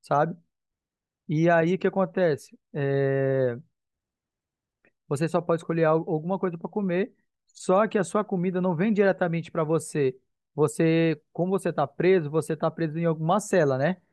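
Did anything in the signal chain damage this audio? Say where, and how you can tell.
No, nothing in the signal chain audibly damages this speech recording. There is no stage where a problem can be heard, so there is no evidence to point to.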